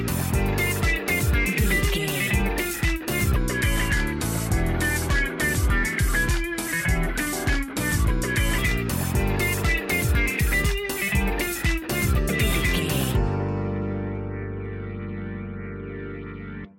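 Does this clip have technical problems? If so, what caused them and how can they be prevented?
Yes. From 3.36 to 8.58 s there is a section at the wrong speed. It plays at 0.844 times normal rate, so it runs slower and sounds about three semitones lower. This is likely from being resampled or played against a mismatched clock. To prevent it, confirm that every edit and playback stage uses the same sample rate.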